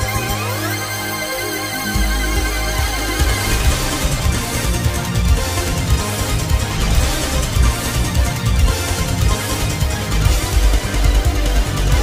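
No faults are present in the clip at any point.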